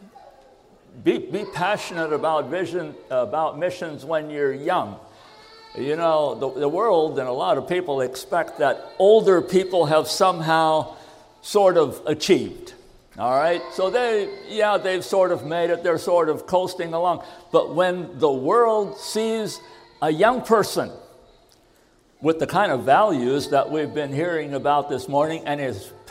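Nothing here calls for comment, since no technical faults turn up anywhere in the recording.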